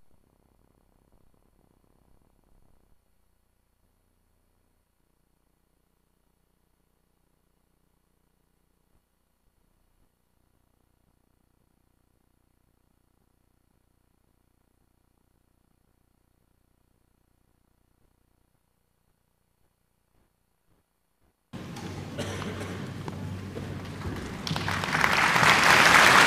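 At 23.08 to 23.10 s a single loud pop, likely a voltage pulse from a plug, switch, static or driver glitch, stands a few dB above the sound: a narrow waveform spike and a thin full-height vertical stripe on a spectrogram.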